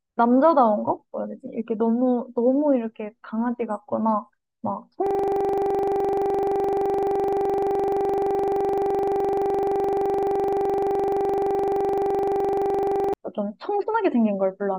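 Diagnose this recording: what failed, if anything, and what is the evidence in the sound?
The driver or buffer stage failed: the host or driver froze while the audio hardware kept replaying the same ring buffer, producing a system hang loop. From 5.07 s to 13.14 s, the speech is replaced by one 42.67 ms fragment repeating exactly, well over a hundred times. At a repeat rate of 23.4 Hz, this sounds like a rapid, rough stutter-buzz. The loop length fits a 2048-sample buffer.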